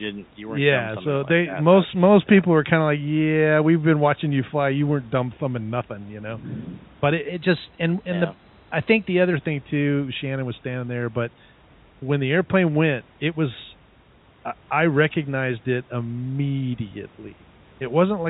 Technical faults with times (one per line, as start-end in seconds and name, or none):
7.28-9.33 drift correction step